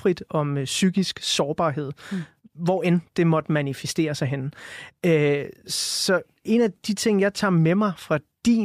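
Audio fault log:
Nothing to log here, as the speech comes through with no audible faults at any point.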